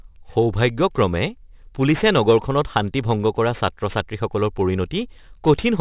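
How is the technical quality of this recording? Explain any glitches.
The recording has audible aliasing from start to finish. The sound points to a drop to an 8 kHz rate without an anti-alias filter, so content above 4 kHz folds back below it, about 25 dB under the speech, leaving sibilants gritty and metallic with energy crowding the band edge.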